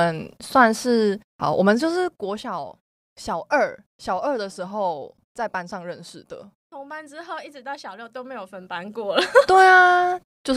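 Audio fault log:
Nothing to log here; the speech just runs along without any fault turning up.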